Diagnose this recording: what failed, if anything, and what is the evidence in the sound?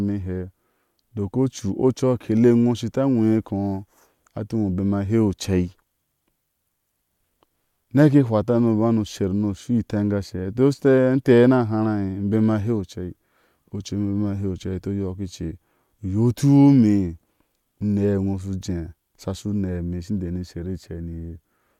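Nothing in the speech stood out as a fault on listening, at any stage of the chain.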